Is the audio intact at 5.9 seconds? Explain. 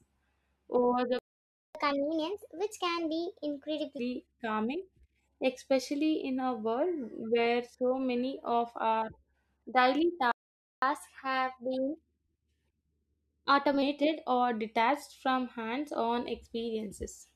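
Yes, at 5.9 seconds the speech plays through cleanly, with no dropout, click, distortion or other fault audible at that moment.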